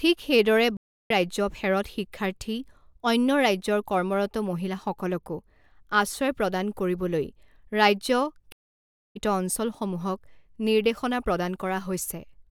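At 0.77 s and again at 8.52 s the speech cuts out in a stream reconnect: the connection broke, the player went silent, then rejoined and started a new decoder mid-stream. The gaps last 324 ms and 630 ms, and each time the speech resumes at a later point, roughly 0.4 s and half a second on, with a muted or faded first moment. That skipped material distinguishes it from a simple dropout, which would pick up where it stopped.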